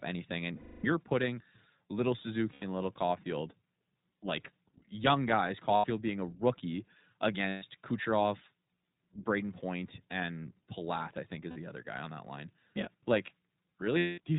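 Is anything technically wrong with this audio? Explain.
Yes, there are two related faults, both from a low-bitrate VoIP codec.

The iLBC codec affects the whole speech clip. This narrowband coder cuts everything above 4 kHz and rebuilds the excitation of each short frame on its own, without drawing on the frame before. The result is speech that stays clear but sounds plainly rough, muffled and slightly synthetic. The sound points to 20 ms frames at about 15.2 kbps.

Lost iLBC frames cause six dropouts, at 0.56 to 0.86 s, 2.52 to 2.64 s, 5.76 to 5.86 s, 7.48 to 7.64 s, 11.50 to 11.58 s and 13.98 to 14.20 s. They last between 60 and 280 ms, and the longest is the first. With each missing packet, the decoder fills the gap by repeating the last pitch cycle blended with noise, so each gap sounds like a held, buzzy or breathy vowel. Over the longer losses the fill fades away. Because every frame decodes independently, the speech snaps back cleanly right after each gap.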